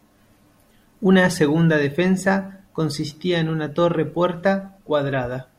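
No technical faults can be heard anywhere in this recording.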